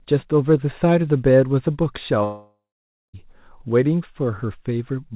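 At 2.24 s the sound breaks off and doesn't properly return until about 3.15 s. This is most likely a long network dropout. Around 0.9 s of audio never arrived, and the receiver tried to bridge the gap by stretching the last bit it had into a buzzy tail that fades out. For roughly the last 0.54 s of that stretch there's just silence. When the sound resumes, the missing piece is simply gone. Throughout, the band stops at 4 kHz, which fits a G.711 mu-law call path at 64 kbps.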